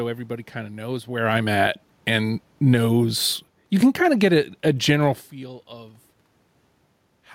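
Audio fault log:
1.09–2.89 s and 3.68–5.01 s, automatic gain falling: the gain control judged the input too loud or its background noise too strong and eased its gain down, by about 6 dB in the first stretch and about 4 dB in the second, so the speech and the room noise behind it sink together.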